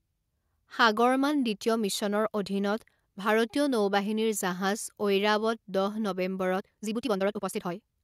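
From 6.54 s to the end, the speech suddenly rushes along at roughly twice its pace, yet the pitch stays put. This time-stretched section was likely squeezed by software that dropped short slices of audio to shorten it while preserving pitch.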